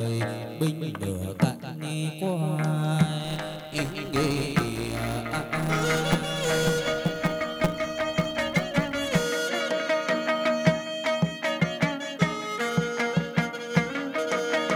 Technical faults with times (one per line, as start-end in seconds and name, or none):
3.24-9.24 filter restarted on every block